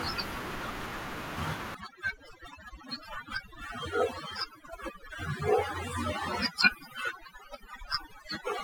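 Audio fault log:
1.75–8.63 s, overdone noise removal: from 1.75 s to the end the noise reduction is set far too hard, so any frequency band that dips near its noise estimate is pushed down or switched off, taking the quiet parts of the speech with it. The room noise, about 19 dB under the speech, drops and breaks up into twinkling specks. A spectrogram shows a blank floor dotted with isolated bright specks, and harmonics broken into patchy, gappy fragments.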